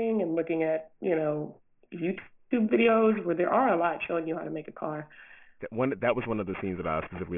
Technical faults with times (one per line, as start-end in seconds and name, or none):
0.00-7.38 aliasing